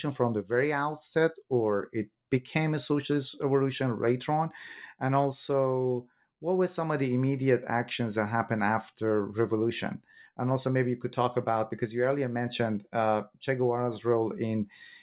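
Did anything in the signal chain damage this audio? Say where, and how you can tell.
No: the speech comes through a mu-law G.711 telephone path at 8,000 samples a second, band-limited below 4 kHz as that format always is, and nothing in the chain harms it beyond what the format itself imposes.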